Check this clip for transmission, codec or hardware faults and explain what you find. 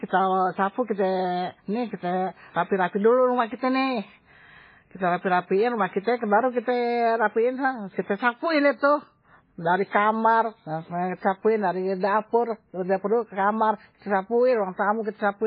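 Transcoding between lossy codecs runs throughout the speech. The audio was likely encoded at a very low bitrate, around 16 kbit/s in MP3, then re-encoded with WMA at roughly 48 kbit/s. The second encoder spent its bits reproducing the first one's smearing and swirling artefacts and added its own, and the first stage's bandwidth limit carried through: nothing sounds above about 5.2 kHz. The result is muffled, dull speech with two layers of watery, warbling coding noise.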